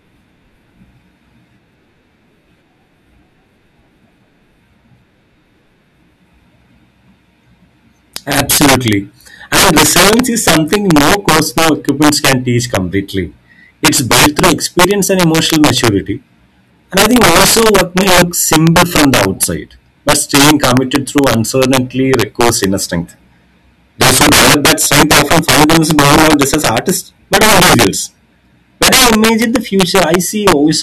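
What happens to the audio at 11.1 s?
At 11.1 s you're hearing integer overflow, which runs through the whole clip: speech peaks pushed about 14 dB too hot wrap to the opposite sign instead of limiting, giving violent cracks on a few percent of samples.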